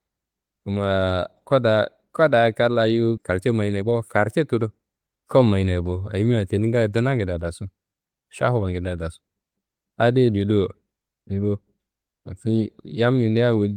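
Skip ahead at 3.17 s in this speech clip: roughly a second of audio is dropped and the two sides are spliced almost directly, with no gap filled, most likely because an overfull jitter buffer discarded it. Jitter buffer speed-up from 3.21 to 5.17 s, ending just before "kuwa mayinaye bo ayimia": the receiver trims short pitch-period slices repeatedly, cutting around 0.4 s so the speech runs at 121% speed at unchanged pitch and sounds hurried.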